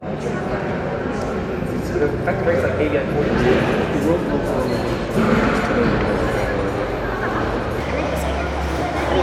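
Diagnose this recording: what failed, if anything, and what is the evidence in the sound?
The failure is a wrong sample rate at the playback stage, from 7.80 s to the end of the clip at 9.23 s. Over that stretch the everyday sounds run 1.38 times faster and sit about 5.5 semitones higher, with speed and pitch shifted together. That locked pairing means the samples were clocked out faster than they were captured, with no resampling. A 1.38 ratio fits 32 kHz material played back at 44.1 kHz.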